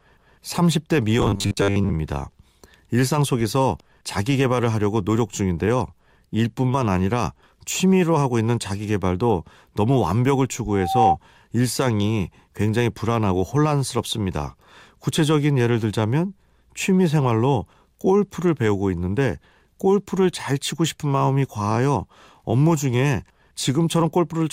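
From 1.19 to 1.94 s, the speech turns into a rigid, metallic buzz. This is robotic sound from repeated short buffers. The buzz sits at 100 Hz, which fits a segment about 10 ms long being replayed. The likely cause is audio arriving too slowly, so the last short chunk is looped to fill the gaps. Roughly half of this stretch is repeated material. The original speech in those gaps is lost.

At 10.68 s a loudspeaker feedback squeal begins. A single tone at 771 Hz swells up over roughly a third of a second. It then holds until 11.17 s and stops. The microphone was picking up its own loudspeaker, and the loop gain at that frequency went above one. The tone ends up a few decibels louder than the speech.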